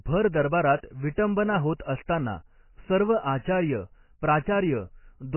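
Heavy MP3 compression runs through the whole speech clip, likely from an encoder starved of bits at a rate that fits about 16 kbps. Nothing survives above 3 kHz, so the sound is dull and watery, with swirling, chirpy sibilants. A spectrogram shows a flat ceiling at 3 kHz and flickering holes below it.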